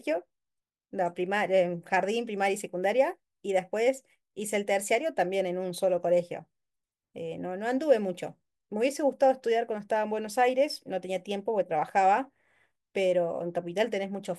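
Speech recording with no audible technical faults anywhere.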